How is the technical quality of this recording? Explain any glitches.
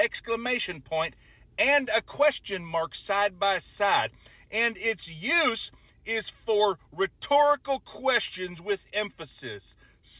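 No glitches to explain: what is audible is just the character of a narrowband call path, with nothing above 4 kHz and the usual coding noise that points to G.711 mu-law.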